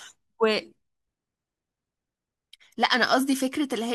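No technical faults are audible.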